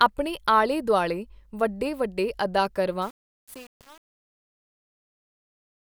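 Truncation distortion on a fade runs from 3.02 s to the end of the speech at 5.97 s. It is at its worst over that whole stretch. The fade-out starts around 3 s. The gain stage behind it keeps only about 7 bits and adds no dither. As the level drops, the waveform collapses onto a few coarse square steps, so the tail turns gritty.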